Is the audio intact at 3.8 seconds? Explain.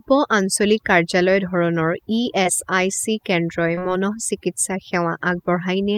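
No. Between 3.75 and 3.79 s there is a short concealed packet loss: roughly 20 ms of the stream never reached the decoder, and the receiver bridged the gap with about 18 ms of sound extrapolated from what came just before, then blended back into the real signal. It is heard as a brief smear in the speech.

Overdone noise removal also affects this moment. The suppressor is set so aggressively that frequency bands close to its noise estimate are pulled far down or removed, along with low-level parts of the speech. The gaps carry twinkling specks.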